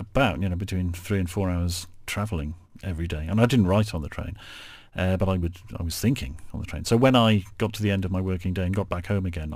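Throughout the speech, crude rate conversion picks the nearest sample instead of filtering, a pattern that fits a change from 48 kHz to 44.1 kHz. Samples drop on a repeating cycle, leaving a gritty, inharmonic fizz some 30 dB below the speech that follows loud and high sounds.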